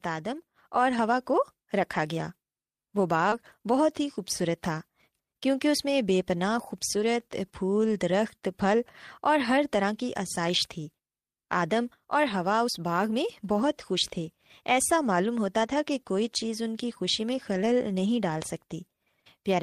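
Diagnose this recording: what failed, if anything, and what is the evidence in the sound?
Short concealed packet loss at the network and decoder stage: around 3.29 to 3.34 s, about 20 ms never arrived and was bridged with 24 ms of extended prior sound, heard as a brief smear rather than a dropout.

Lost packet rebuilt from error correction, also at the network and codec stage: at 3.32 s (20 ms), 6.96 to 7.02 s and 15.68 to 15.74 s (40 ms each), low-bitrate copies fill the gap, so there is no gap, only rougher, noisier frames.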